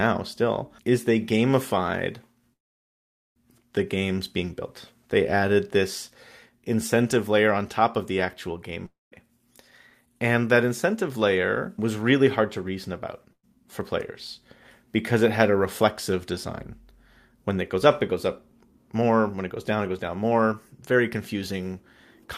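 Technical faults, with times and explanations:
2.53–3.38 s, call audio freeze: The last sound stretches into a fading buzz or hiss, then about 0.82 s of silence, and the speech resumes exactly where it stopped, with nothing missing. Packets were likely held up until the jitter buffer ran dry, so the rest of the speech now plays about 825 ms later.
8.86–9.14 s, long network dropout: The sound trails off as a decaying buzz or hiss into about 0.18 s of silence, then returns further along, with roughly 0.26 s of speech gone. Incoming audio likely stopped for that stretch, and the receiver could only hold the last sound before moving past the lost part.
13.33–13.45 s, burst of packet loss: A brief held buzz or hiss fades to about 60 ms of silence, and the speech jumps ahead with about 100 ms missing. A run of packets was lost or arrived too late, so the receiver briefly extended and faded the last sound.
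10.05–11.80 s, 17.37–18.13 s and 18.95–21.52 s, jitter buffer speed-up: The speech sounds hurried while its pitch stays the same. It runs at 108%, 106% and 108% speed, losing roughly 150 ms, 50 ms and 200 ms. The receiver trimmed short pitch-period slices to work off excess buffered delay.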